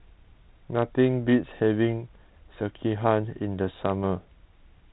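No technical faults can be heard anywhere in the recording. The speech comes through a G.726 ADPCM path at 32 kbit/s, which leaves it band-limited to telephone width with nothing above 4 kHz and only a light coding grain that follows the level of the voice.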